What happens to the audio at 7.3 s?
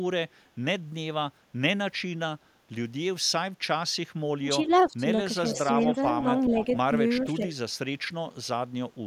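Between 7.25 and 7.43 s the speech briefly dips by about 5 dB. This is speech suppressed in double talk, likely an echo canceller ducking overlapping talk.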